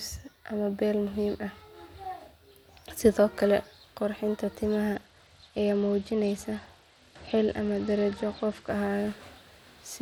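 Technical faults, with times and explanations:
4.95 to 8.69 s, Bluetooth SBC bit pool drop: the speech turns dull and loses its treble while a gritty noise rises, then clears. This fits the link cutting the SBC bit pool from 28 to about 11, near 90 kbps, starving the top sub-bands and coarsely quantising the rest.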